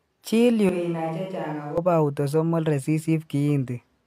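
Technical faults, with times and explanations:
0.69 to 1.78 s, switch to a distant microphone: the speech suddenly turns roomy and hollow, loses bass, and drops about 10 dB. Room noise sits only around 35 dB below the speech, so it is easier to hear. The likely cause is that the close microphone dropped out and a microphone further away took over, capturing more reflections and ambience relative to direct sound. The sound snaps back just as abruptly at 1.78 s.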